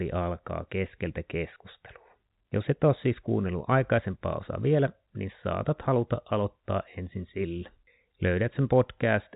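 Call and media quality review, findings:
No faults found; speech runs over G.711 telephone coding, band-limited with nothing above 3.8 kHz, consistent with a standard 64 kbps mu-law telephone path.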